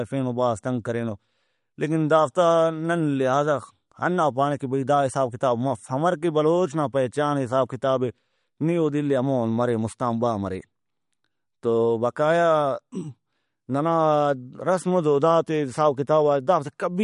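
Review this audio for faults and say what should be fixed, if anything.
The whole clip sounds noticeably watery, with swirly, chirpy treble on sibilants and nothing above about 11.2 kHz, which points to likely MP3 compression at a low bitrate near 50 kbps, where the encoder cut the top end and dropped weak detail frame to frame. To avoid it, go back to the original recording or encode at a much higher bitrate.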